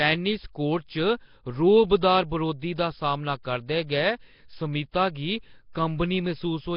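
Throughout the speech there is a rough, hissy halo and a smeared, underwater quality, with nothing above 5.3 kHz. The heavy damage is likely Nellymoser compression, fitting a bitrate near 22 kbps; a spectrogram shows a hard ceiling and grainy, noise-filled patches where weak bands went unpaid.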